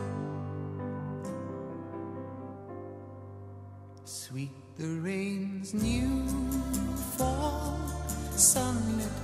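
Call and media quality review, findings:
Pre-emphasis left on, 5.81 s to 9.24 s. Abrupt shift to thin, bright, sibilant top end. Treble lift fits a 50 µs FM curve, about 10 dB up at 10 kHz re 1 kHz. Probable component: missing de-emphasis stage in the receive or playback path.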